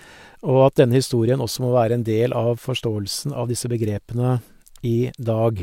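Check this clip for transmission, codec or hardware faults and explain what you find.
Nothing in this speech recording stands out as a fault, so there's nothing to flag here.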